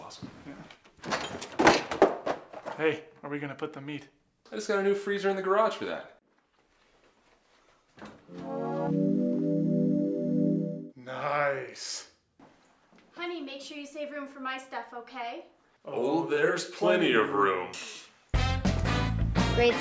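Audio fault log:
Nothing to log for this clip, as no fault can be heard anywhere in it. The audio runs on without any event that needs an entry here.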